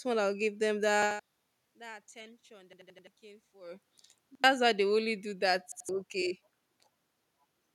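A hard-edged stutter interrupts the speech four times: at 1.02 to 1.20 s the same short fragment plays twice more, at 2.73 to 3.07 s it repeats four extra times, at 4.35 to 4.44 s once, and at 5.72 to 5.89 s twice. This is a repeated buffer. Fresh audio failed to reach the output in time, so the last chunk, about 85 ms long, which fits a 4096-sample buffer, was played again with an abrupt join at each repeat. Each stall drops a little real audio, up to roughly a third of a second at the longest.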